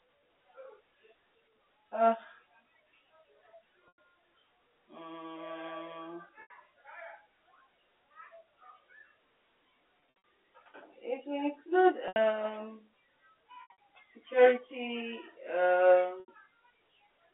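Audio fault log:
3.88–3.98 s, 6.42–6.50 s, 10.00–10.24 s, 12.08–12.16 s, 13.62–13.77 s, 16.20–16.28 s: packet loss with pitch repetition. The receiver lost 80 to 160 ms of audio each time, scattered at 10.0 and 13.6 s, which fits 20 ms packets. It filled each gap by repeating the last pitch period, so the sound holds on a brief buzzy tone that fades into silence before resuming.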